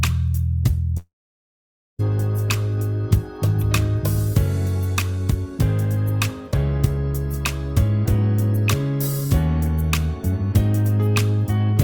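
At 0.97 s the sound smears into a buzz that fades within about a tenth of a second, then near-silence until audio returns at 2.01 s, with about a second lost. This is likely a long network dropout, with the receiver stretching the last sound.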